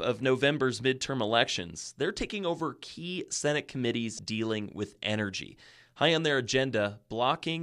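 Speech, with a burst of damaged data in a compressed stream from 4.16 to 4.19 s: corrupted bytes make the decoder misread frames and resync, leaving a brief glitch such as a chirp, click or short hole.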